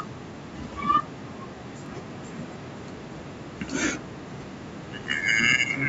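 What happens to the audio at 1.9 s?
From 1.86 to 1.88 s, overlapping chunks replay about 21 ms at a 2-second chunk join, giving a stutter-click where sound repeats rather than dropping out.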